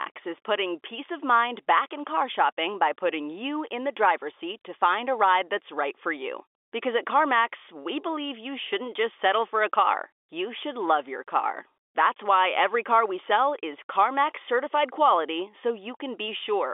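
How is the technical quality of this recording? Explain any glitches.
No glitches or faults detected.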